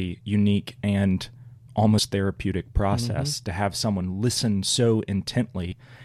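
At 1.97 s and 5.71 s, compressed frames were skipped. The speech jumps ahead about two frames, then one, which fits 26.1 ms frames.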